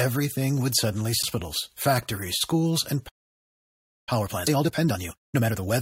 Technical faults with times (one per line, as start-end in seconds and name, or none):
1.22 damaged data in a compressed stream
2.40 damaged data in a compressed stream
3.08-4.09 playback stall
4.09-5.71 time-compressed catch-up
4.47 damaged data in a compressed stream